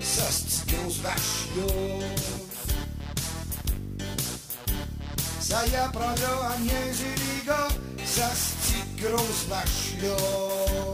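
From 5.67 s to the end, the converter's sample clock becomes unstable, producing sample clock jitter: each sample is captured a little early or late at random, on the order of 10 microseconds. Because the timing error turns into an amplitude error wherever the waveform changes fastest, a rough hiss rides on the sound, only around 10 dB below it, growing with loud, bright passages and dropping away in quiet gaps.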